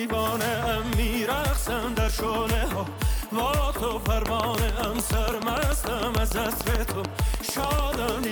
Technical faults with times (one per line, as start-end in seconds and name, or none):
4.26-8.25 train of clicks